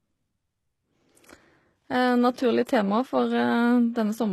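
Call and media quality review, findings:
Codec: likely HE-AAC at a low bitrate, around 16 kbps; treble rebuilt by spectral band replication. Plainly audible damage: s sounds gritty, metallic or lispy, nothing above 12.3 kHz.

Transform block at 2.65 s spreads quantisation noise ahead of an attack. Pre-echo: about 15 ms of hiss before the onset, which sounds soft or smeared.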